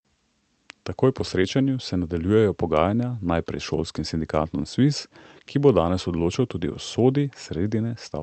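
No technical faults can be heard in this speech.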